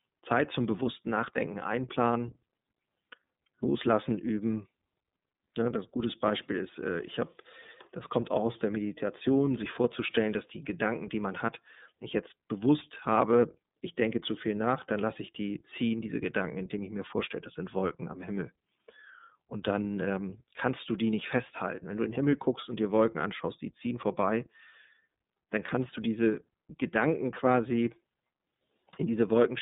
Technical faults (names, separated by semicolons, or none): iLBC codec